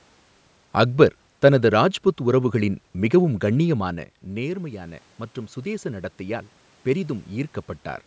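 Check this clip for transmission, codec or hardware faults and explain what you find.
One fault is present in this speech. Automatic gain rising, 3.77 to 8.02 s: after the voice drops about 12 dB, gain control slowly adds about 6 dB, swelling voice and room noise together.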